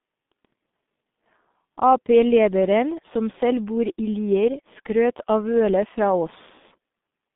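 Throughout, G.723.1 codec damage is heavy: nothing above 3.8 kHz survives, leaving muffled, hoarse speech with smeared consonants, which fits a low rate near 6.3 kbit/s.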